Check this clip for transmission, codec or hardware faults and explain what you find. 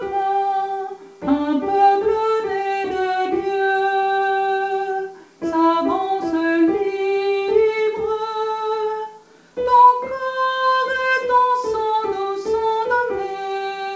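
Nothing stood out on listening: the sound carries the band limit at 8 kHz that the call codec imposes, and no transmission, codec or hardware problem could be heard beyond that.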